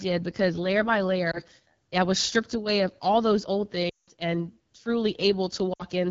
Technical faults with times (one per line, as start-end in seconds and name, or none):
0.00-6.10 AMR wideband (HD Voice) codec
1.31-1.41 lost AMR speech frames
3.89-4.10 lost AMR speech frames
5.73-5.83 lost AMR speech frames